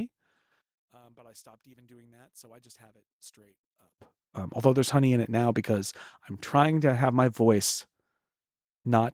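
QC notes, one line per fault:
0.61–3.99 s, one channel inverted: the speech abruptly collapses by about 30 dB to a faint residue, then returns at full level. The likely cause is reversed polarity on one stereo channel during this span. When the two channels are summed to mono, the centred speech they share cancels almost completely. What survives is only the small difference between them, which is why a weak trace remains instead of silence.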